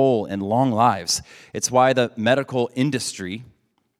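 Listening to the speech carefully, nothing technical stood out.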